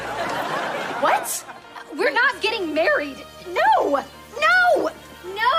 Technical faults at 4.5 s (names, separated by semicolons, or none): video or display buzz